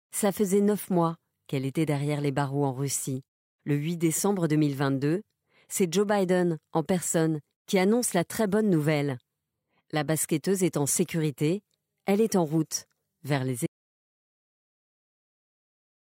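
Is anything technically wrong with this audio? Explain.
Yes. After "en route vers les", at 13.67 s, the speech is cut off abruptly and the rest of the clip is an audio dropout to silence lasting to the end, likely a lost input while silence kept being written. Unlike a natural pause, no room tone remains.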